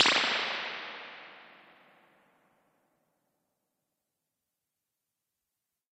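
At 2.19 s the adaptive stream drops to a lower bitrate after the connection slows, and it stays there to the end. With no gap, the sound abruptly gains codec artefacts, which fits a step down from Opus 64 to 16 kbit/s.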